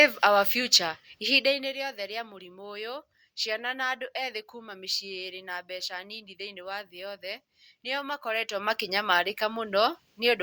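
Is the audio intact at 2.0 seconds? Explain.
Yes, the speech at 2.0 seconds is intact, with no audible fault at that moment.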